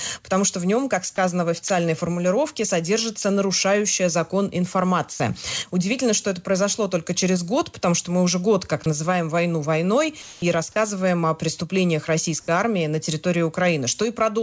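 Three brief holes where the sound itself gives way to steady noise or near silence come at 1.68 s, 3.22 s and from 5.12 to 5.20 s, 20 ms each for the first two and 80 ms for the third. This is sound dropped by the voice detector: the sender likely judged these stretches to be background, stopped transmitting, and the receiver filled in comfort noise until the detector triggered again. What separates it from ordinary packet loss is that the gap holds steady noise or near silence rather than a smeared or repeated fragment of the preceding sound.

Two other spots, from 10.22 to 10.42 s and from 12.40 to 12.48 s, show comfort noise in place of the background. During pauses where the background sits about 25 and 27 dB below the loud parts, its natural texture is replaced by smooth synthetic noise, likely generated by the receiver during discontinuous transmission. The first substitution matches the surrounding level, and the second drops about 4 dB. 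Unlike the dropouts above, nothing but background is lost. Throughout, the audio carries nothing above 8 kHz, which fits a G.722 call codec at 64 kbps.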